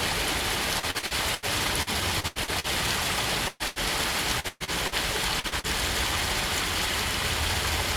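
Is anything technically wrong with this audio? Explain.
Yes. The audio, a recording of everyday sounds, is broken up repeatedly by network-style losses, along with two isolated clicks.

Repeated packet loss (robotic sound) occurs from 0.79 to 1.45 s, 1.82 to 2.67 s and 4.40 to 4.95 s. Each stretch turns choppy and mechanical, with pieces of the sound missing. The first two contain five gaps each and the third contains four, totalling about 240 ms lost per stretch. The gaps run up to about 80 ms in the first two stretches and 122 ms in the third. The receiver patched each hole by extending the preceding sound, and those patches fill 35%, 28% and 44% of the three spans.

A burst of packet loss follows at 3.48 to 3.63 s and again at 3.68 to 3.79 s. Each time the sound freezes into a held continuation that fades, then the audio picks up further along. About 120 ms and then 80 ms of real audio never arrived. 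The decoder bridged each gap by prolonging and turning down the last sound rather than leaving silence, so what lay in between is gone.

Dropped samples produce a sharp, single click at 4.19 s and another at 5.87 s. Each click is likely a fraction of a millisecond of samples missing from the stream. The waveform jumps straight to a later value, and that discontinuity is what makes the click, while no audible portion of the sound is lost.

Short concealed packet loss appears as three quick smears or wobbles, at 5.40 to 5.47 s, 5.48 to 5.55 s and 5.60 to 5.67 s. In each case 40 ms of audio failed to reach the decoder in time. The receiver synthesised a continuation of the preceding sound and blended it back into the real signal, so a brief sound inside any of these windows can vanish.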